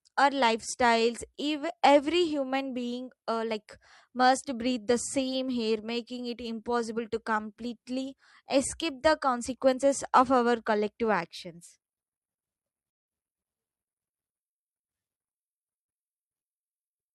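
A digital broadcast dropout cuts into the speech from 12.91 to 13.08 s, a gap of about 170 ms. The receiver stopped getting decodable data, either because the signal itself was lost or because incoming frames failed their error check, so it muted the output rather than play corrupted audio. The speech drops into silence and resumes further on, and whatever was transmitted during that hole is simply gone. The length fits roughly four lost frames.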